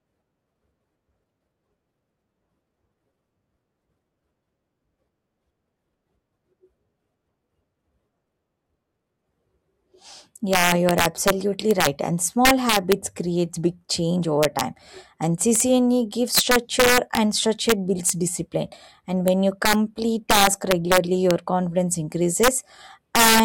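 A speech recording marred by integer overflow throughout: the signal was driven roughly 9 dB past the integer limit, and instead of being capped, each peak wrapped to the opposite extreme. Only a small fraction of samples, well under one percent, cross the limit, but each one cracks violently on the loudest syllables. On a waveform these show as vertical jumps from one extreme straight to the opposite one; a spectrogram shows thin full-band vertical streaks.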